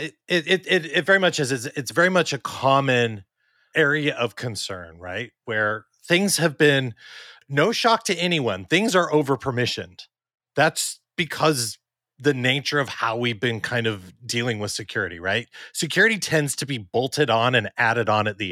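Nothing in this stretch of speech catches the ear as a technical fault at any point, so there's no timeline of problems to walk through.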